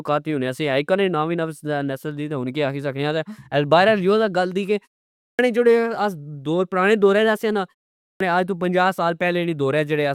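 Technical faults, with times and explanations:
5.19–5.39 s and 8.03–8.20 s: clipped start after a pause. Each time the output device idles through a short silence, about 0.4 s after "گل دی کہ" and 0.37 s after "دورہچ سے آ نا", and is slow to wake or relock. The first 199 ms and 174 ms of the following speech are lost, so the words jump abruptly out of silence with their opening sounds missing.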